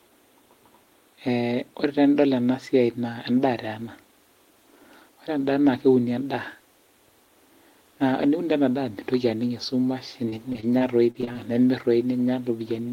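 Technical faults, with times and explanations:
10.29–11.37 s, repeated packet loss (robotic sound): choppy speech with pieces missing as nine short gaps, the longest 42 ms, are each patched by stretching the preceding sound.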